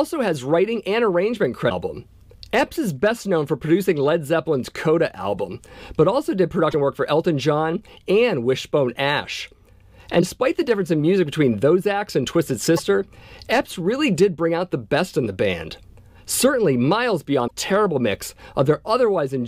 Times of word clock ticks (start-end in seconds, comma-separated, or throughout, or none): none